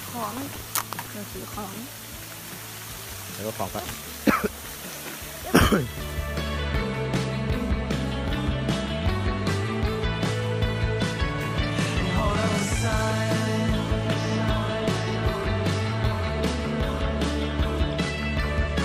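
Right from the start, from 0.0 to about 1.10 s, there's buffer tearing: the writer and the hardware reader of the ring buffer have drifted so they cross mid-period, and a small slice of each buffer, only a few percent, carries audio from roughly 150 ms earlier, butted in with hard joins either side. You hear it as a steady robotic rattle at about 21.5 Hz, which fits a 2048-sample buffer, riding on the sound itself.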